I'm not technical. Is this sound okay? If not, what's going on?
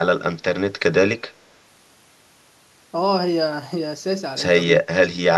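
No. From 4.77 to 5.35 s the speech drops sharply and breaks up. This is speech suppressed in double talk, likely an echo canceller turning down overlapping talk.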